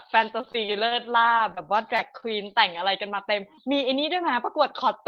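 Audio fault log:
0.41–2.81 s, repeated packet loss (robotic sound): About a dozen short dropouts, none longer than 30 ms, recur across this span. Each one is papered over by extending the preceding sound, and the next arrives before the ear settles, so the speech turns choppy and machine-like. About 211 ms is synthetic fill, around 9% of the stretch, and about 120 ms of real signal is lost outright, leaving audible holes between patched segments.
3.55–3.59 s, short concealed packet loss: A single 20 ms slice of the call failed to reach the decoder in time. The receiver bridged it by prolonging the last sound, repeating its pitch where voiced or substituting shaped noise where unvoiced, then crossfaded back into the real signal. About 20 ms of actual audio is missing, heard as a brief smear or wobble.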